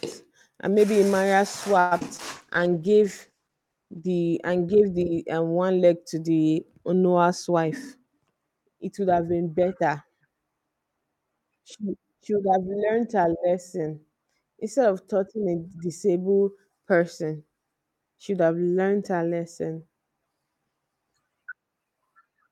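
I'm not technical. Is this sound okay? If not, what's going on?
No, there are three problems in this speech.

From 1.79 to 2.20 s there is repeated packet loss, giving a robotic sound. Pieces of the call went missing four times in quick succession, the longest gap lasting 118 ms. Each hole was patched by stretching the last sound, so the speech turns choppy, with pieces missing.

Right after, from 2.18 to 5.53 s, comes a call bitrate drop. The connection allowed far less data, so the speech was squeezed much harder and lost its crisp top end. It sounds rough and muffled until it recovers, just before "leg to the".

From 7.49 to 8.66 s there is a jitter buffer speed-up. Audio had piled up in the receiver, so tiny slices, about a tenth of a second in total, were cut out to catch up. The speech runs about 9% faster at the same pitch, sounding hurried.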